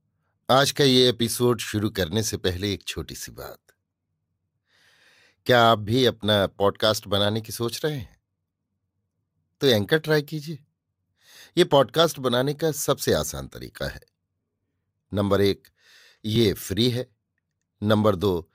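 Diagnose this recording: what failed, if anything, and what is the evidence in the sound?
At 16.36 s the speech jumps ahead a few milliseconds without silence, likely a dropped buffer (overrun) in the driver, not a dropout.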